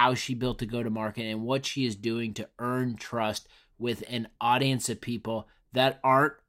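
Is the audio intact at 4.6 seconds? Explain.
Yes, the audio is intact at 4.6 seconds, with no fault at that moment.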